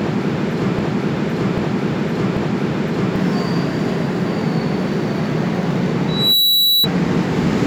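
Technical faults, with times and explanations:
0.00–3.16 s, broken-record loop: already under way when the clip opens, a 0.79 s fragment of the sound repeats three times back to back, exactly the same each pass. That points to a likely stall in the player or stream resending its last chunk, so whatever belonged there is gone.
6.08–6.88 s, loudspeaker feedback squeal: a single tone at 3.9 kHz swells up over roughly a third of a second to sit about 5 dB above the sound. That's a mic hearing its own speaker, with the loop gain topping one at that frequency.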